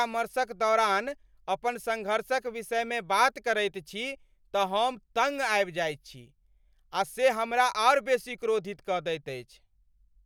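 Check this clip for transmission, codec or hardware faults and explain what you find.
Nothing stood out on listening to this speech recording.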